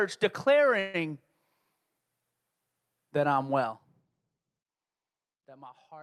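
At 0.79 s the speech stalls for about 145 ms, until 0.96 s: a call audio freeze, likely from packets held up in transit so the jitter buffer ran dry. The receiver stretches the last sound into a fading buzz rather than silence, and the speech then resumes where it stopped, now about 145 ms later, with nothing lost. A spectrogram shows smeared, repeating bands with no new structure; the waveform shows a decaying, periodic stretch in place of speech.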